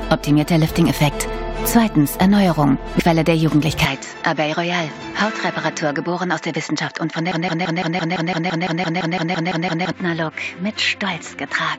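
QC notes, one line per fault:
3.85–11.78 s, input switched to a poorer device: At 3.85 s the sound abruptly turns duller and somewhat quieter, about 5 dB down, with no gap at the changeover. From there to the end nothing is present above 7.6 kHz, and a new background noise floor sits roughly 50 dB under the signal. The sudden band limit, level step and fresh noise likely point to the capture path moving to a narrower-band microphone or headset profile.
7.32–9.92 s, broken-record loop: A fragment of 0.17 s repeats exactly, back to back, 15 times, giving a rapid mechanical stutter at about 6 repeats per second for roughly 2.6 s. Whatever should have played in that span is gone, and normal audio resumes at 9.92 s. The identical repeats likely come from a player, encoder or stream stall that kept resending the last buffered fragment until the data flow recovered.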